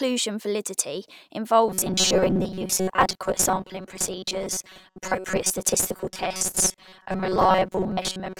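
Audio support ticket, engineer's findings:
Robotic sound from repeated short buffers, 1.68 s to end: metallic 188 Hz buzz, most speech lost. Likely starved buffer repeating chunks of about 5.3 ms.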